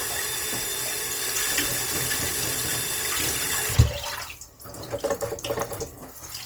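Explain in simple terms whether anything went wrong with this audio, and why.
The audio was likely squeezed hard by Opus compression, which saves data by filling in fine detail with borrowed or invented noise rather than keeping the real thing. From start to finish, the sounds come out grainy, rough and noisy, though the high end stays present.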